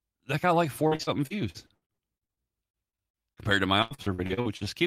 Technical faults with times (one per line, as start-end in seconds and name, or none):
0.87-3.40 repeated packet loss (robotic sound)
3.82-4.69 repeated packet loss (robotic sound)